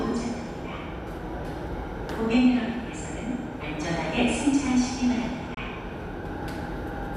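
At 5.54 to 5.58 s there is a digital broadcast dropout. The receiver muted after failing to decode incoming data, so the sound fades out over about 3 ms and leaves a gap of roughly 24 ms. This fits a single lost frame. The missing material is gone, not delayed.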